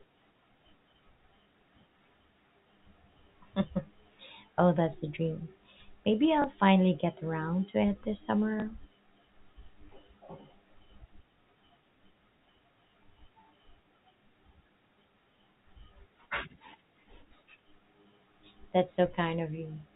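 At 1.44 s, 6.42 to 6.44 s before "finally get around to", and 8.60 to 8.62 s after "around to it this", packet loss with last packet repeated replays one 20 ms packet. Each repeat sounds like a small blip rather than dropping to silence.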